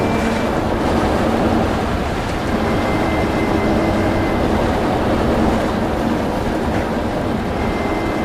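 A slower capture path likely doubled the audio track from 0.84 to 5.62 s, adding a dry copy about 5 dB down, trailing by roughly 200 ms.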